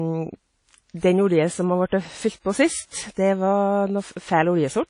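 The speech throughout sounds washy and ringing, with a hiss that swells and fades along with the voice. The top end is dulled, with nothing audible above about 10.1 kHz. These plainly audible smeared artefacts and the hard upper cut-off point to likely WMA compression at a low bitrate, which fits roughly 32 kbps. There, the long transform blocks spread quantisation noise over tens of milliseconds and weaker spectral lines are zeroed out.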